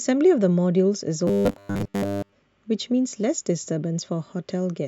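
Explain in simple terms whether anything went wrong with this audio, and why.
Yes, something went wrong. From 1.27 to 2.34 s the speech turns into a rigid, metallic buzz at a fixed 100 Hz: robotic sound from repeated short buffers. New audio likely arrived too slowly, so the same 10 ms snippet kept repeating, covering most of that stretch.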